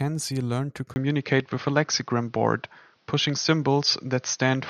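Speech recording where, at 0.94 s, a 20 ms gap precedes a duller, band-limited sound with nothing above 6.4 kHz, a roughly 5 dB level shift and new background noise about 40 dB below the speech, likely from the input switching to a poorer device.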